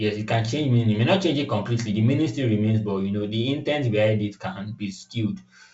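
Nothing stood out on listening to this speech, which comes across as ordinary wideband telephone audio consistent with G.722 coding, with content reaching up to about 7.7 kHz.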